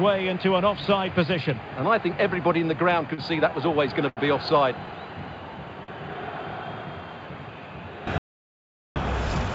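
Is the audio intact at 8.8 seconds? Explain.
No. An audio dropout to silence covers 8.18 to 8.96 s, so 8.8 s falls inside it. The sound stops abruptly, and about 0.78 s of silence follows, with no background or room tone. Whatever sounded then is lost. The likely cause is the input briefly disappearing, through a disconnect or mute, while recording continued writing silence, before the sound resumes mid-flow through the G.722 call path.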